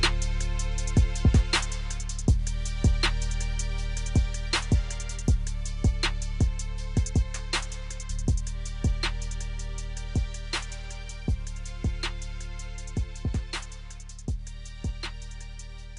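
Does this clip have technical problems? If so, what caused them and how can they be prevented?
No, nothing here sounds like a technical problem, so there's nothing to trace back or guard against.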